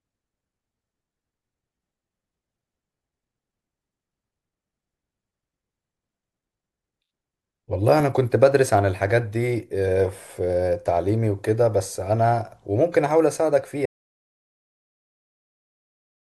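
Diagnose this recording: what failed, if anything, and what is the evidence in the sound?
Audio dropout to silence from 13.86 s to the end of the speech clip: the sound cuts off mid-flow and the last 2.4 s are silent, with no room tone or noise floor left. The fault sits before the converter's output reached storage. The input was likely lost through a disconnected device, a failed link or a mute, while the recorder kept writing empty samples, so whatever was said after 13.86 s was never captured.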